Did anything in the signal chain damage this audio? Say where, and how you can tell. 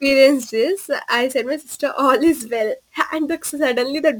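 Yes. The damage happened at the sample-format conversion stage. Crude rate conversion affects the entire speech clip. A gritty, inharmonic fizz follows the louder and brighter syllables, sitting roughly 25 dB below the speech. The buzz fits a 48 kHz to 44.1 kHz change made by picking the nearest sample, with no filter. Each sample is therefore slightly mistimed in a repeating pattern, which creates tones unrelated to the voice. A spectrogram would show faint bands that don't follow the harmonics.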